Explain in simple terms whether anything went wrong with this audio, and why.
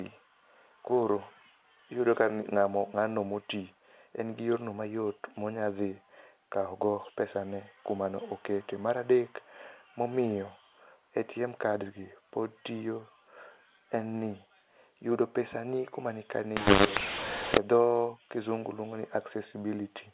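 For about one second, from 16.57 to 17.58 s, the speech turns harsh and crackly. Loud and soft parts come out at the wrong strengths, and the quiet moments fill with a gritty hiss instead of silence. This is a mu-law and A-law mix-up. The sound was stored in the telephone A-law format, but this stretch was read back as if it were mu-law, so every level was translated using the wrong scale.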